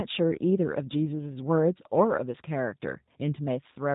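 Speech carrying G.729 codec damage from start to finish: nothing passes above 3.8 kHz, and the voice sounds plainly rough and synthetic, rebuilt from a vocal tract model, pitch predictor and sparse pulses. The sound points to G.729A at 8 kbit/s.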